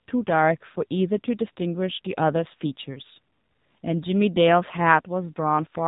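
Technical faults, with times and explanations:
Throughout, AMR narrowband mobile codec: nothing passes above 4 kHz, and the speech has a buzzy, synthetic edge from being rebuilt as a vocal-tract model driven by sparse pulses, which fits about 7.4 kbps. A plain low-pass filter would leave the remaining band natural.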